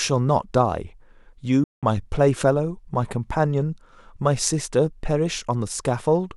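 Bluetooth dropout at 1.64 to 1.83 s: the speech cuts abruptly to silence for 186 ms, likely from wireless packets arriving too late, then resumes further along.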